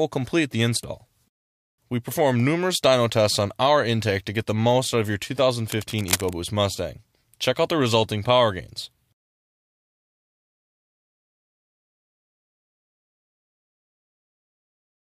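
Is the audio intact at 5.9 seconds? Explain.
No, 5.9 seconds falls right inside a burst of cable scratch noise running from about 5.70 to 6.33 s. You get a dense, uneven scratchy rustle over the sound, sitting roughly 10 dB under it. The likely cause is a worn cable, connector or control being moved, with its contact resistance jumping around quickly and spraying those ragged noise bursts into the signal for that moment.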